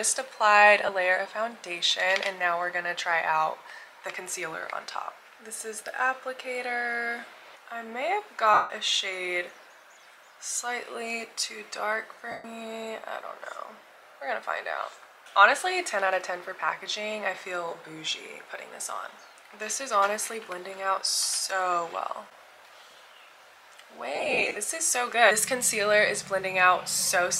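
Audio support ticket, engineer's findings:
Lost LE Audio frames at 0.81, 8.54, 12.31 and 24.15 s, with gaps up to 0.16 s. LC3 decoder repeats the last spectrum with random signs, giving a noisy smear that fades toward silence.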